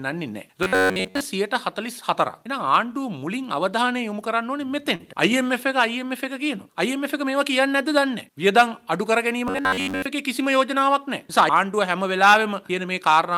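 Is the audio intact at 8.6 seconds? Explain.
Yes, the audio at 8.6 seconds is intact, with nothing wrong to be heard at that moment.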